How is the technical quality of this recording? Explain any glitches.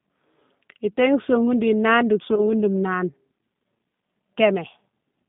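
The recording has two faults: codec damage throughout and one dropout glitch.

Throughout, the speech passes through a G.729 codec, which fits an 8 kbit/s call. It rebuilds speech from a synthetic model limited to roughly 150 Hz to 3.6 kHz, so the voice sounds thin, rough and synthetic.

From 2.35 to 2.45 s, just after "nane di", there is VoIP packet loss concealed by the speech codec. About 20 ms of audio went missing, consistent with a single lost packet. The decoder stretched its last sound into a fading buzzy tone or coloured noise, and the voice stays briefly weakened after the gap.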